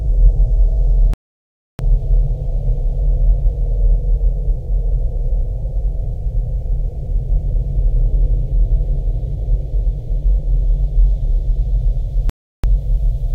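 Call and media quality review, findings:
Playback stall, 1.14–1.79 s and 12.30–12.64 s: sound cuts to silence mid-flow for about 0.66 s, then about 0.34 s. Likely player buffer underrun or blocked audio thread.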